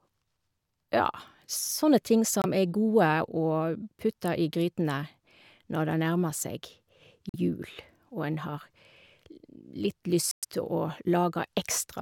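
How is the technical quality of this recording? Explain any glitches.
The speech has three short gaps. At 2.42, 7.29 and 10.31 s it cuts to silence for about 23, 46 and 116 ms, likely a Bluetooth dropout: packets missing their deadline, which fits one, two and five lost frames. The speech resumes further along, as though it kept playing.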